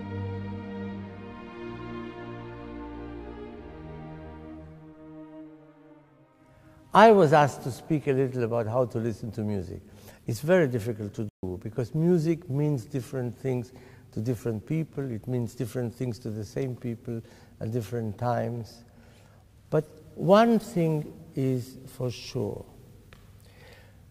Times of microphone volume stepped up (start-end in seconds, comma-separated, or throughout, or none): none